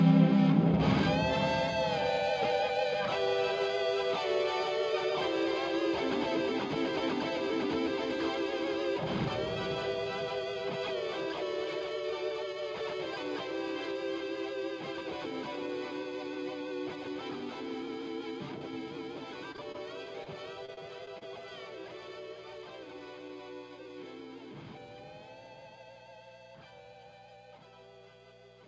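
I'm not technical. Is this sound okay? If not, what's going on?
No, there are a few short glitches, all clustered between about 19.5 and 21.2 seconds.

At 19.52 to 19.56, 19.72 to 19.76 and 20.24 to 20.28 s you hear a quick smear or wobble. This is short concealed packet loss: about 20 ms of sound each time never arrived, so the receiving end patched the gap by extending the last sound and then blended back in.

Right after the first one, from 19.56 to 19.60 s, a sound is held slightly too long, with a slight buzz or dip. This is a short stall from a late packet: a piece of audio arrived about 15 ms late, so the receiver stretched what it had until it caught up. Nothing is actually lost here.

From 20.66 to 21.23 s the sound turns choppy. This is repeated packet loss: four separate gaps, the longest about 30 ms, were each patched in quick succession. The patching covers about a sixth of that stretch, so small pieces are missing.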